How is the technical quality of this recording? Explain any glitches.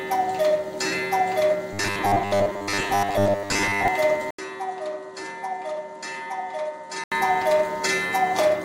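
The recording has two clear glitches, one metallic and one a sudden change of tone.

From 1.73 to 3.88 s the sound becomes robotic, most likely from repeated short buffers. When new audio arrives late, the software replays the last fragment, and here most of the passage is such repeats. They impose a steady 100 Hz buzz, which fits a 10 ms buffer. Unlike a codec's warbly artefacts, the buzz holds one fixed pitch while the underlying sound keeps moving.

From 4.31 to 7.12 s the input likely switched to a poorer device. An 80 ms silence marks the switch. After it, the device passes a narrower band, so the sound turns duller. It also drops by roughly 10 dB, and a new, faint background noise sits well below it. A gradual filter or fade would not do this. The gap, the narrower band and the new noise floor all arrive together and then reverse, as a device change would.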